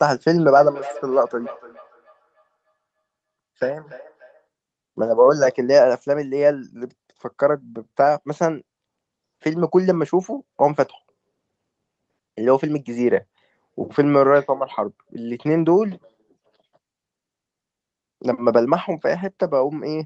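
A speech clip with feedback echo between two devices from 0.5 to 4.47 s. Each word returns about a third of a second later, thinner and ringing, peaking at about 19 dB below the speech. A second device in the room likely replayed this microphone's signal back into it. The call's own echo canceller can't remove sound played by another device.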